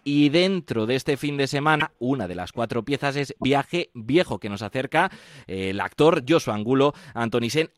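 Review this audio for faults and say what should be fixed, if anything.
There are two short glitches, at 1.79 to 1.82 s and 3.41 to 3.44 s, where the sound skips ahead. Each is about one 26 ms frame long, likely a broken MP3 bit reservoir after frames were cut. Cutting or splicing on decoded audio, or re-encoding after the edit, would prevent it.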